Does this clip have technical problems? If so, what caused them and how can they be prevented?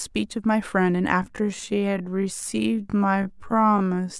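Yes. From 1.2 s to the end, there is a time-stretched section. Software likely stretched the audio to fill a longer slot, repeating short pieces to keep the pitch while playing at about 0.52 times normal speed. The pace abruptly drops to roughly half while the pitch holds, so the speech drags. To prevent it, trim or re-time the material to fit the slot instead of stretching audio this far.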